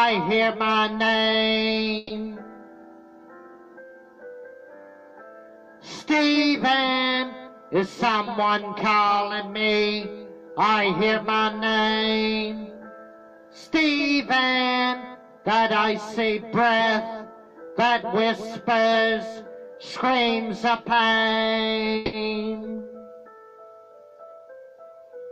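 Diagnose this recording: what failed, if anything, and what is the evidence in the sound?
Call audio freeze at 1.97–2.12 s and 21.96–22.15 s: the sound stalls into a fading buzz for 130 ms and then 170 ms, then resumes exactly where it stopped, with nothing lost. This is likely a network delay that drained the receiver's jitter buffer, adding latency each time.

Jitter buffer speed-up at 14.78–15.95 s and 24.10–24.53 s: the audio hurries, about 8% and then 15% fast, with pitch unchanged. The buffer trimmed short pitch-period slices, roughly a tenth of a second and then somewhat less, to shed excess delay.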